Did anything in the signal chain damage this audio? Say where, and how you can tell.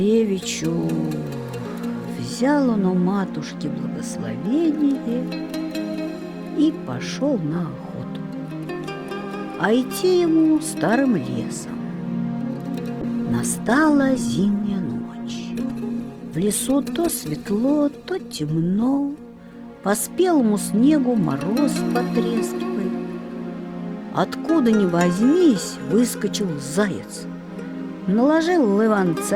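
Yes. From 13.03 s to 20.43 s there is a call bitrate drop: the sound turns coarse and muffled, with a rough, watery texture that lingers for nearly six seconds at its worst before clarity returns. The codec is starved of bits after the bandwidth estimate falls, which fits a drop from 64 kbps to 16 kbps. On a spectrogram, the upper band is abruptly cut off and smeared across that span, then fills back in afterwards.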